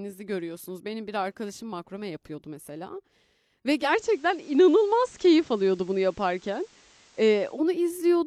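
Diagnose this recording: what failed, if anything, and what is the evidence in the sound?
Digital radio blending to analogue, from 3.78 s to 7.64 s, at the broadcast reception stage. The receiver lost the digital stream and cross-faded over 172 ms to the station's FM signal. Hiss rises to about 30 dB below the speech, with no change in level, before the receiver blends back.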